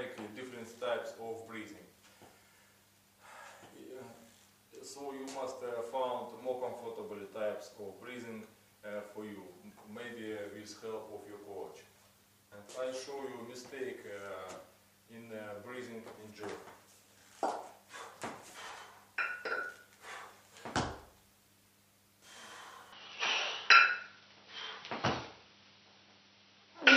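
At 22.92 s the sound abruptly loses its top end and stays that way to the end. Nothing reaches above 5.9 kHz, so it turns dull and boxy, with a small jump in level and a faint new background noise well beneath the signal. There's no gap at the change. This is likely an input switched to a poorer device mid-recording. On a spectrogram the upper band cuts off sharply at a flat ceiling; the waveform shows a modest step in amplitude.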